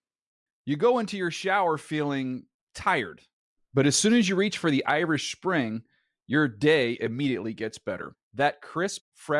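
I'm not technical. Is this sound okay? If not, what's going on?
Yes, no faults here.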